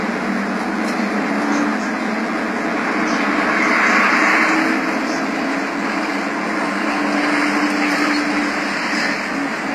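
From the first second to the end, a steady, thin DECT cordless phone buzz sits under the sound. Its fundamental is 100 Hz, with a dense stack of harmonics above it. That spacing matches a DECT handset or base station transmitting a short radio burst every 10 ms. Some stage of the audio chain is picking up the burst and rectifying it into the signal path. The buzz runs roughly 25 dB below the programme, constant and unaffected by the material.

Also present for the whole clip is plainly audible codec damage, most likely from HE-AAC compression. The upper register is bright but sounds synthetic: sibilant and noisy components come across gritty and metallic, and their harmonic structure fails to line up across the crossover into the treble. This fits spectral band replication rebuilding the high band from copied lower bands at a low bitrate, around 24 kbps. Nothing is present above 14.9 kHz.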